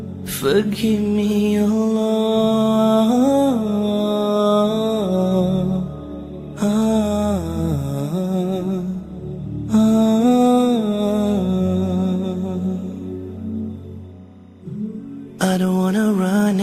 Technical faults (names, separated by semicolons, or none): timecode bleed